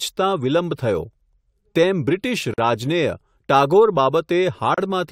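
Separately encoded pieces of this speech clip were joined without trimming the encoder's start-up delay and last-frame padding, leaving a gap at a join of encoded pieces twice. Right after "તેમ બ્રિટિશ", at 2.54 s, the audio drops into about 44 ms of silence, and at 4.74 s a second gap lasts about 34 ms. Each has sudden edges, softened by the codec, before the sound resumes exactly where it broke off.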